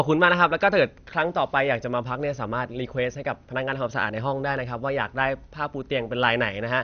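From start to finish the speech sounds dull and plainly gurgling, with a granular roughness and nothing at all above about 6.5 kHz. The likely cause is MP2 compression at a low bitrate, one that fits something around 48 kbps. MPEG Layer II divides the signal into 32 sub-bands, and when bits run short the upper bands are dropped while the surviving ones are coarsely quantised, producing that flickering, watery texture.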